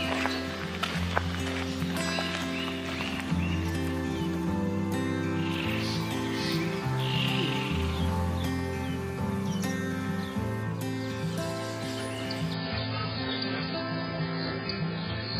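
At 12.54 s the adaptive stream drops to a lower bitrate without a gap. Treble vanishes above 5.1 kHz, and artefacts rise, which points to roughly 12 kbit/s.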